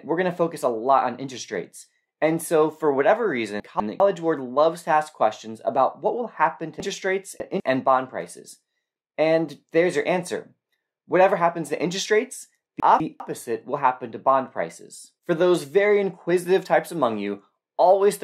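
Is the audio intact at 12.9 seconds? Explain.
No. From 12.8 to 13.2 s the chunks are out of order: a 200 ms block arrives one chunk late and plays after its successor. Unlike a dropout, nothing goes silent or missing. The sound briefly jumbles, with three hard joins.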